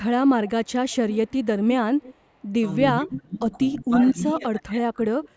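Right from 0.47 to 0.71 s there's an echo leak: a faint delayed copy of the speech trailing about 300 ms behind, roughly 25 dB down. It's likely the far end's loudspeaker feeding its mic, with the echo canceller not catching all of it. It comes back at 0.89 to 1.45 s, loudest here at only about 15 dB below the speech, then at 1.99 to 2.15 s and 2.42 to 2.47 s. The last of those is barely there. The delay has settled at about 330 ms by then.

From 3.0 to 3.43 s we get speech suppressed in double talk. The level dips hard, as much as about 30 dB, likely because the canceller couldn't tell the talker from the returning echo and ducked both. Another echo scrap shows up at 3.76 s. After that the speech sags again, more gently (about 15 dB), from 3.81 to 4.17 s. Then it drops by about 25 dB from 4.33 s until the clip ends. All of this sits in audio topping out at 8 kHz.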